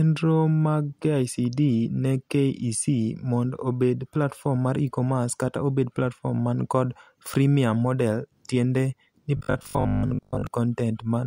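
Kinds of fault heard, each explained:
Robotic sound from repeated short buffers: From 9.37 to 10.47 s the speech becomes a rigid, metallic buzz at 50 Hz. The cause is likely fresh audio arriving late, so a 20 ms slice replayed through most of that stretch.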